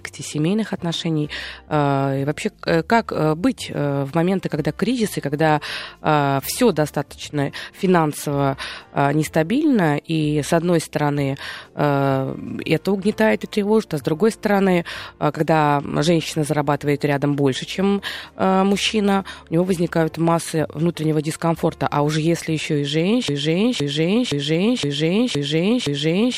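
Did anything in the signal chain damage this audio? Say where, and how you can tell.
Yes. From 23.28 s to the end of the clip the speech turns into a broken-record loop: one fragment about 0.52 s long repeats exactly, back to back, six times, with no new material after it. The identical repeats and fixed period point to a stall at the buffer or playback stage, most likely a player or stream that ran dry and kept re-sending its last held block. The speech that belonged in those final three seconds is lost.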